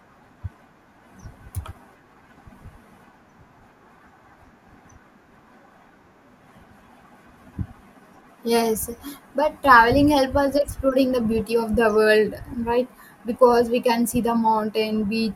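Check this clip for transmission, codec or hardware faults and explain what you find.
One fault is present. From 12.29 to 12.53 s, just after "the beauty of the", the speech breaks into DAB burbling. Weak reception lets a small fraction of bit errors, well under one percent, slip past error correction into the MP2 data. The corrupted samples put short blips of noise in single sub-bands, and corrupted scale factors make sub-bands jump in level for up to a frame, giving blips and level jumps over the speech.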